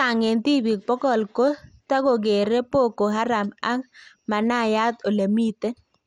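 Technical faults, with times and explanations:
Throughout, MP2 compression: the speech sounds dull and carries a gurgling, granular roughness, with nothing above about 15.8 kHz. The likely cause is MPEG Layer II coding at a low rate, which fits roughly 64 kbps. The coder splits the signal into 32 sub-bands and shares too few bits among them, so upper bands drop out and flicker while the remaining ones are coarsely quantised. That produces the watery grain.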